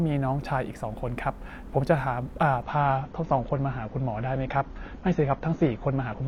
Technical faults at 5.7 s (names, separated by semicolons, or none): adaptive stream at a lower bitrate